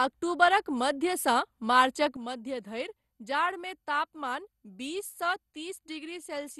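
From the first moment the speech is dull and carries a gurgling, granular edge, with nothing above about 12.2 kHz. This is most likely MP2 compression at a low bitrate, with a character that fits roughly 64 kbps: the coder shares too few bits among its 32 sub-bands, so the top bands are dropped and the rest are coarsely quantised. On a spectrogram the energy stops at a hard ceiling near 12.2 kHz, with patchy blocks flickering below it.

At 2.17 s the level falls abruptly by about 9 dB and stays down to the end, the speech and the background noise dropping together. This sudden gain jump likely comes from a digital gain change applied from one sample to the next with no ramp. On a waveform the envelope steps down at a single instant, and on a spectrogram every band, noise floor included, darkens along one vertical line.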